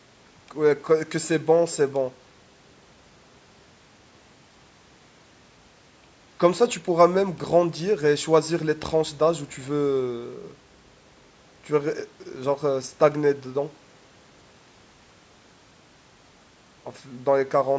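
No faults in this speech recording; the band stops at about 8 kHz and the lowest bass is rolled off, both expected from the call's microphone processing.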